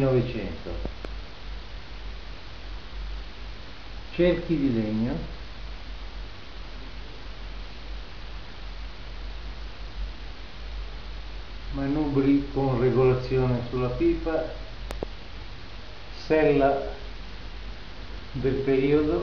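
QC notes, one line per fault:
0.86–1.07 s: loud pop. Two sharp pops land in quick succession, well above the level of the sound. The sound carries on underneath them. The pair likely comes from a sudden voltage step, such as a plug, switch or static discharge.
14.91–15.05 s: loud pop. Another quick double pop, louder than the first, about 15 dB over the signal. The sound underneath is not interrupted.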